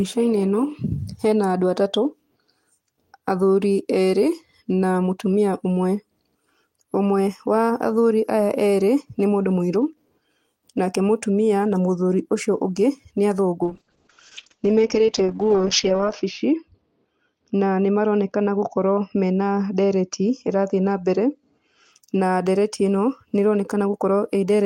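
From 13.65 to 21.97 s there's a call bitrate drop. Everything above 8 kHz vanishes and the speech turns rough and muffled, which points to squeezing down near 7 kbps.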